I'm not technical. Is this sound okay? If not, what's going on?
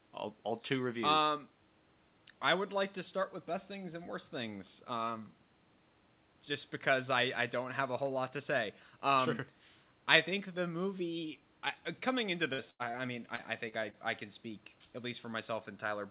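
No. Around 12.5 seconds the call lost a burst of packet loss twice in quick succession, about 60 ms missing from 12.53 to 12.61 s and 90 ms from 12.70 to 12.82 s. The receiver stretched the last sound to cover each gap, so you hear a brief held buzz or fading hiss and then a small jump where audio was skipped.

Right after that come four bits of short concealed packet loss, at 12.91 to 12.97, 13.36 to 13.41, 13.68 to 13.75 and 13.90 to 13.96 s. Each time about 30 ms arrived too late and was patched over, heard as a quick smear or wobble that can swallow a short consonant.

The sound also stops at 4 kHz, which is ordinary for this kind of phone-style call line.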